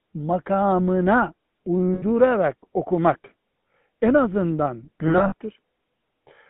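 Throughout, the speech has a buzzy, gravelly roughness confined to a band from 150 Hz to 3.7 kHz. This is the GSM full-rate codec, which models the vocal tract and drives it with coarse, regularly spaced pulses, consistent with a 13 kbps full-rate coder.

From 1.94 to 2.03 s the sound freezes into a rough, metallic ring for 80 ms. These are lost GSM frames, each replaced by the last good frame's settings. Just after "en azından", from 5.08 to 5.34 s, the ringing returns in patches: 140 ms lost across 240 ms, the longest run around 70 ms.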